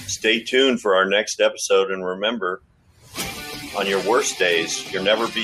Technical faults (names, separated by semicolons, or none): noise suppressor applied to music or sounds; sound cut by the noise suppressor